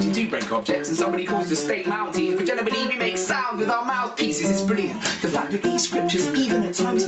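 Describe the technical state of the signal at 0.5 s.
Gain pumping is present at 0.5 s, as it is throughout the clip. The level swings by something like 15 dB, leaving loud and soft parts squashed close together. The likely cause is input gain set far too high for the microphone, with a fast limiter or compressor clamping it down on every peak. The top end stops near 8 kHz, as expected from the call path.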